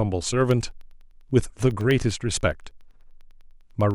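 A speech recording with periodic USB or driver dropouts from 0.41 s to 3.91 s. Every 0.1 s a tiny slice, around a tenth of a millisecond, drops to silence, giving regular ticks under the speech. A spectrogram shows evenly spaced thin vertical broadband lines, and a zoomed waveform shows brief notches to near silence.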